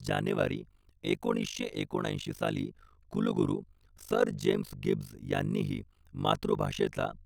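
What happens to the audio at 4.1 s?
Overlap-add ripple runs through 4.1 s and the whole clip: frames rejoined with mismatched overlap swing the level about 60 dB around fifty times a second, a harsh robotic flutter.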